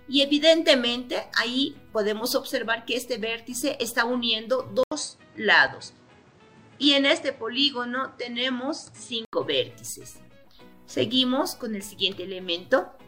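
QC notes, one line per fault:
4.83–9.33 s, input switched to a poorer device: at 4.83 s the sound drops out for 80 ms, then returns dull and boxy with nothing above 9.1 kHz and a faint new background hiss well below the signal. At 9.33 s it clears again, and the loudness stays much the same throughout. This is likely a mid-recording switch to a narrower-band microphone or headset profile, which brings its own tone and noise floor.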